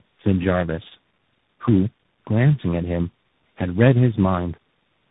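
Throughout the speech, tandem speech coding is at work: the audio sounds as if it passed through about four speech codecs in a row, each re-encoding the previous one's damage. The result is rough, muffled and warbly, with the buzzy, slope-following grain of a CVSD-style coder at the end. A spectrogram shows nothing above 3.8 kHz, smeared harmonics and a grainy noise floor, while the waveform looks ragged and blunted.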